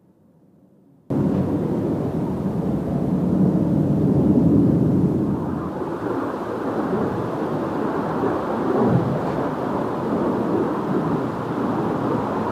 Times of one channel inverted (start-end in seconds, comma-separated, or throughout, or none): 0.00-1.10